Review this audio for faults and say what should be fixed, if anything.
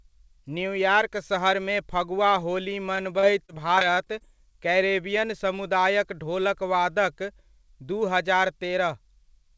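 From 2.96 s to 4.22 s, right after "फगुआ होली" and before "कैरेबियन समुदायक", the speech turns choppy and robotic. That's repeated packet loss: around a dozen short holes, the longest about 34 ms, each papered over by stretching the last bit of sound before the next one hits. Roughly a seventh of that stretch is patched-in filler, which gives it the chopped-up feel. The G.722 call path, with nothing above 8 kHz, doesn't hide any of it. To prevent it, fix the network jitter and loss on that link, or give the jitter buffer more headroom and turn on FEC.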